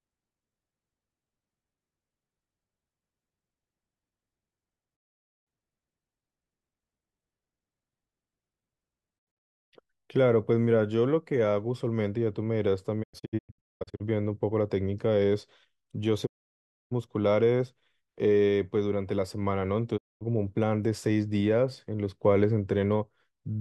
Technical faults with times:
4.95-5.47 digital broadcast dropout
9.18-9.73 digital broadcast dropout
13.02-14.02 digital broadcast dropout
16.25-16.93 digital broadcast dropout
19.96-20.23 digital broadcast dropout

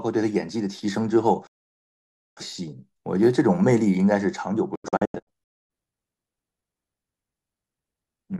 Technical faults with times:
1.47-2.41 digital broadcast dropout
4.75-5.70 digital broadcast dropout

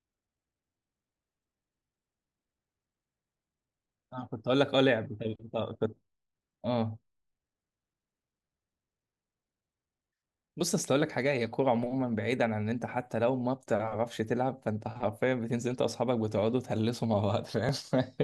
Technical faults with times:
11.47 dropped buffer (overrun)
17.69 dropped buffer (overrun)

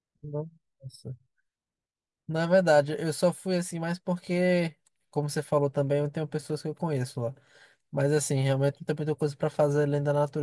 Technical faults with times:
none

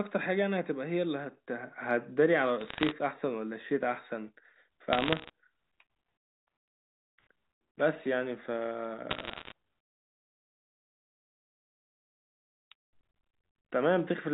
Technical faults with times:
2.60-2.91 bit errors on a digital phone line
4.93-5.30 bit errors on a digital phone line
9.10-9.52 bit errors on a digital phone line

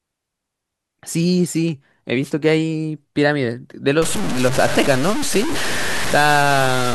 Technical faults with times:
2.22-2.32 wireless microphone noise hit
4.02-6.95 low bit depth without dither

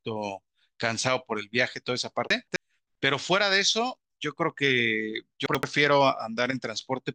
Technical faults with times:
2.30-2.56 chunks out of order
5.46-5.63 chunks out of order

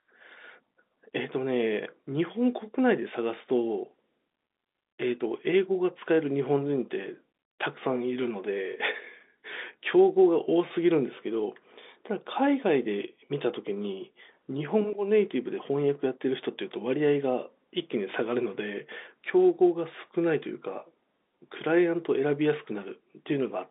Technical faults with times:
none

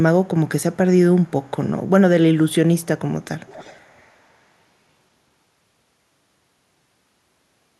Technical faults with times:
0.61-0.77 echo leak
1.22-1.51 echo leak
2.75-2.86 echo leak
3.22-4.02 echo leak

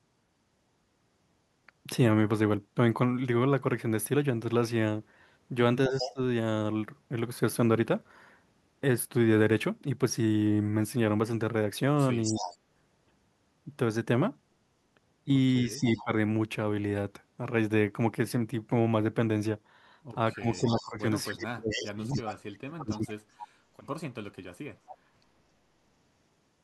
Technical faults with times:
5.88-6.13 echo leak
5.88-6.19 speech suppressed in double talk
12.23-12.57 echo leak
12.31-12.55 speech suppressed in double talk
15.65-16.11 speech suppressed in double talk
15.96-16.03 echo leak
20.35-23.22 speech suppressed in double talk
20.52-24.96 echo leak

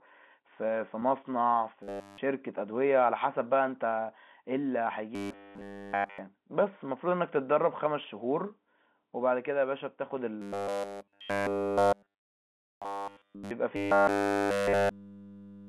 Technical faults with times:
1.00-1.02 packet loss with pitch repetition
1.83-2.18 robotic sound from repeated short buffers
5.15-6.18 robotic sound from repeated short buffers
10.42-13.51 robotic sound from repeated short buffers
13.76-15.68 robotic sound from repeated short buffers

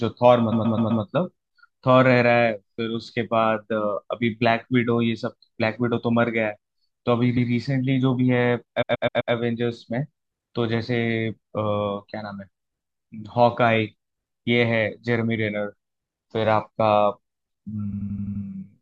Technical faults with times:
0.51-1.02 repeated frames
7.36-7.49 repeated frames
8.81-9.32 repeated frames
17.92-18.43 repeated frames

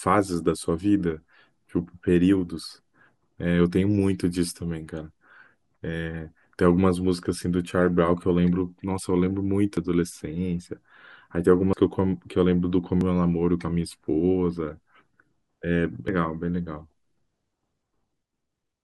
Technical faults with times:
9.77 compressed frames skipped
11.73 compressed frames skipped
13.01 compressed frames skipped
16.08 compressed frames skipped

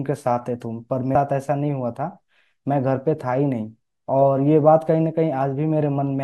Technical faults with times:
1.14 compressed frames skipped

